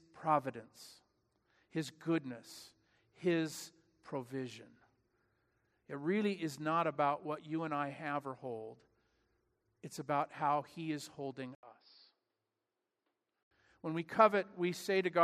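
At 11.55 s the speech drops out for about 80 ms, then comes back duller and boxier: nothing gets through above 5.4 kHz, the level sits roughly 5 dB lower, and a faint new noise floor appears well under the speech. That's most likely the input switched to a poorer device mid-recording, with its narrower band, different tone and own background noise. At 13.51 s the fuller, brighter sound returns.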